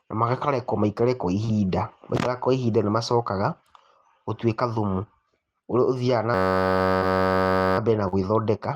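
A steady buzz at about 93.8 Hz takes over this speech recording from 6.34 to 7.78 s, ending just before "mbere na". This is a system hang loop: the driver stalled while the hardware replayed one 10.67 ms slice 135 times, which fits a 512-sample buffer. Brief smears at 1.45 to 1.50 s, right after "na makarekwo maikare kwa", at 6.98 to 7.04 s, and at 8.08 to 8.17 s, after "na mbere na", are short concealed packet loss. Each time, the decoder bridged a 20 to 40 ms gap by extending the preceding sound.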